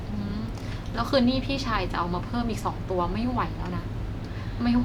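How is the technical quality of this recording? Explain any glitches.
No glitches or technical faults can be heard here.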